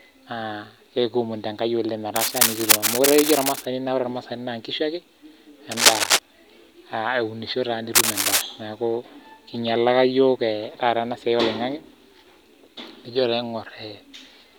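Cable scratch noise appears from 2.16 to 3.65 s after "ekiomonito enkai oleng", at about the speech level, then louder than the speech from 5.72 to 6.19 s and from 7.95 to 8.42 s, between "aa eunisho taa" and "naaku einyalaka yook taata". Each is a dense, uneven scratching rustle. The likely cause is a worn cable or connector being moved, so its contact resistance fluctuates rapidly.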